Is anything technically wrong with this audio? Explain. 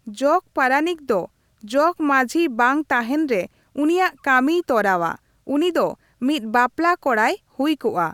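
No, nothing technically wrong turns up anywhere in this speech recording, so there's nothing to flag.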